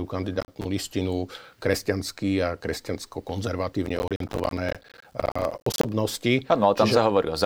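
Speech, and it's hit by processor overload crackle twice: a short burst from 0.41 to 0.65 s and a much longer stretch from 3.86 to 5.89 s. The machine couldn't fill its small audio buffers, around 10 ms each, on time, so each missed deadline dropped a sliver of silence with hard edges. Strung together, about 15 in the first burst and dozens in the second, those gaps make the gritty, tearing crackle riding on the speech.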